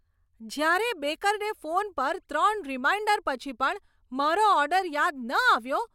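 Speech recording with no technical faults to report.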